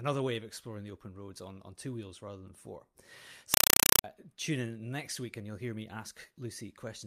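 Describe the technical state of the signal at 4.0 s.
Compressed stream played as audio runs from 3.54 to 4.04 s, so 4.0 s falls inside it, just before "tune in next week". Data that fits a Dolby Digital (AC-3) bitstream is being treated as ordinary samples instead of being decoded. Each frame comes out as a 4 ms burst of noise followed by silent padding, repeating 31.25 times a second. The speech is replaced by very loud, harsh, chattering static.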